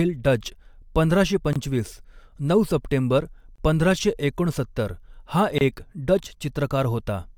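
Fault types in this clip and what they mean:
Gap at a join of encoded pieces: the speech drops into brief silence three times, at 1.53 s after "डच पंधराशे", at 3.56 s before "पंधराशे एकोणसत्तर हा एक", and at 5.58 s. Each hole lasts about 25 to 27 ms, with smeared edges, and the sound resumes where it stopped. The 2.0 s spacing fits separately encoded pieces joined untrimmed, each keeping its encoder start delay and final-frame padding.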